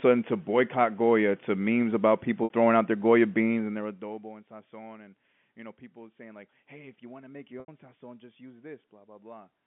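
Telephone-band speech carries two brief packet loss with pitch repetition dropouts, at 2.44–2.50 s (60 ms) and 7.60–7.68 s (80 ms), each consistent with a few lost 20 ms packets. The receiver loops the last pitch period with a fade, so the waveform shows identical repeating cycles shrinking in height, and the spectrogram shows flat, unmoving harmonic lines.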